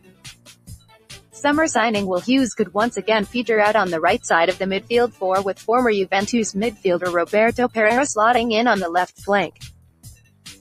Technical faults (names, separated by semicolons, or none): noise suppressor applied to music or sounds; sound cut by the noise suppressor